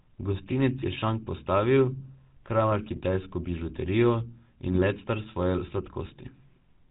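The whole clip carries GSM full-rate codec damage, plainly audible. The sound suggests the 13 kbps full-rate coder. Its pulse-driven vocal-tract model adds a buzzy, gravelly roughness. Nothing above 4 kHz survives, so the speech sounds narrow and dull.

GSM bit errors strike three times. From 0.78 to 0.85 s, just before "je šank postavil", the speech gargles briefly. Further bursts follow at 2.84 to 3.01 s and 4.66 to 4.81 s. Corrupted filter, pitch and gain values warp the spectrum into squawks and pops.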